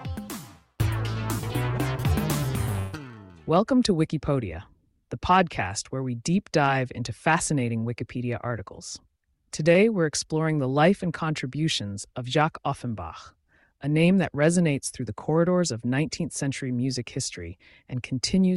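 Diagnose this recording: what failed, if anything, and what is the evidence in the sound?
At 2.79 to 2.95 s there is a call audio freeze in the network path. The last sound is stretched into a fading 136 ms tail, and the audio then resumes where it stopped with nothing lost. The likely cause is late packets draining the jitter buffer. Unlike concealed loss, no audio is missing.

A jitter buffer speed-up occurs at 8.66 to 9.68 s, running at 106% and trimming about 70 ms. It happens again at 17.52 to 18.43 s at 105%, removing about 50 ms. Pitch periods are cut to shrink the buffer, so the sound hurries while keeping its pitch, which rules out a resampling error.

Short concealed packet loss at 9.73 to 9.76 s leaves a brief smear. About 40 ms never reached the decoder, and the receiver patched the gap with an 18 ms extrapolation before blending back into the real signal. Unlike the freeze, real audio is lost here rather than delayed.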